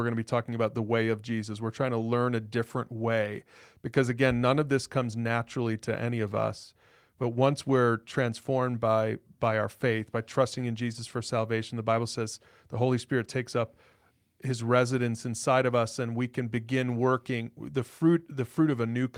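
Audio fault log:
Nothing stood out on listening to this speech recording.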